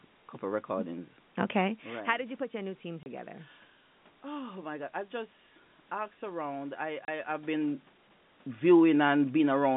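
Packet loss filled with silence occurs twice. At 3.03 to 3.06 s and again at 7.05 to 7.08 s, a packet went missing and the receiver inserted silence, cutting 30 ms holes into the speech. That length points to a single 30 ms packet each time, and each gap has abrupt edges.

Automatic gain falling begins at 8.55 s. The gain control judged the input too loud, or its background noise too strong, and lowered its gain gradually until 9.72 s, by about 3 dB. The speech and the room noise behind it sink together as the level eases down.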